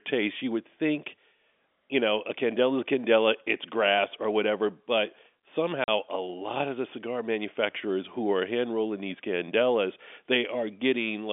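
At 5.84 s the speech drops out completely for 40 ms, ending just before "a lot of the". This is packet loss filled with silence: audio packets never reached the receiver, and it inserted digital silence rather than concealing the gap. The 40 ms length fits two consecutive 20 ms packets. The hole starts and stops abruptly. The surrounding audio carries the narrow 250 Hz to 3.5 kHz band of G.711 telephone coding.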